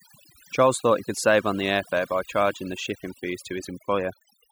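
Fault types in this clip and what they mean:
overdone noise removal: heavy noise reduction runs throughout this speech, gating bands near the noise floor, leaving twinkling specks in near-silence, unlike codec warble.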